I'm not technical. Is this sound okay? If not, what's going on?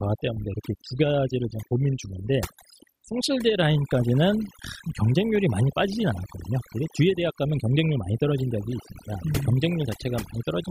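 No, not quite. Throughout the speech there's overdone noise removal: a cleanup tool was pushed too hard, so it wiped out the background noise and quiet parts of the voice along with it. The background drops and breaks up into little sparkly bits.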